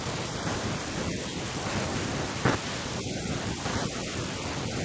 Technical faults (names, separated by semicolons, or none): none